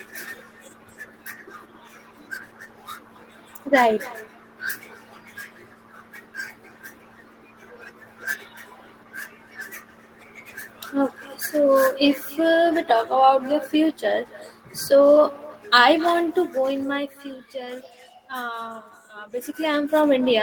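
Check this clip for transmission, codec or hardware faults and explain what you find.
There's one fault here. Echo with no canceller runs throughout: the far end's speaker feeds its mic, returning your speech roughly a third of a second later, about 21 dB down and thinner.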